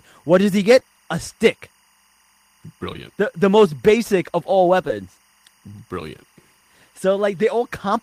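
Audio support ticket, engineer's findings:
Timecode bleed, full length: linear timecode at 24 frames per second leaking from an adjacent track or cable into the speech path. Square wave flipping between roughly 1 kHz and 2 kHz, about 40 dB under the signal; constant chirping warble behind the speech.

Short concealed packet loss, 0.79–0.90 s, 2.93–2.97 s, 4.88–4.91 s: 20 ms of audio each time arrived too late for the decoder. Receiver extended the preceding sound to cover the gap (10, 14 and 13 ms filled), then cross-faded back. Brief smear or wobble at each point. First event also adds roughly 10 ms of time.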